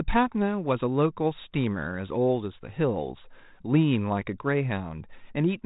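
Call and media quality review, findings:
Nothing to flag on this speech clip; it's a normal 32 kbit/s G.726 ADPCM path with the band topping out around 3.8 kHz as expected and only the light coding grain that rate brings.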